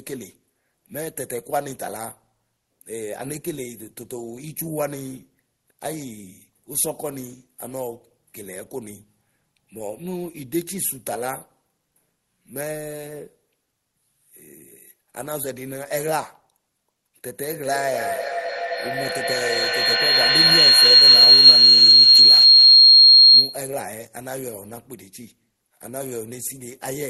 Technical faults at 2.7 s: none

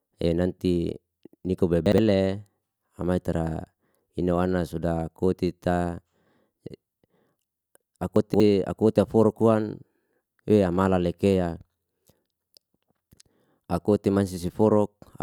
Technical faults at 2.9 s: none

